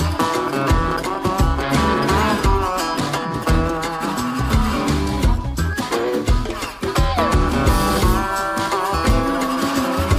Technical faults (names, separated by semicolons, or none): processor overload crackle